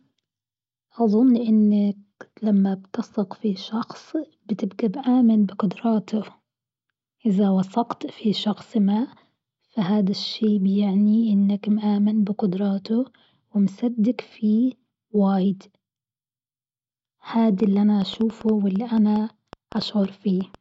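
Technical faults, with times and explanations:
17.60–20.56 s: train of clicks. Around twenty near-identical pulses land at roughly 5.8 per second with uneven spacing, peaking close to the speech level and audible as ticking through the pauses too, likely from interference by nearby equipment or a faulty connection or power supply.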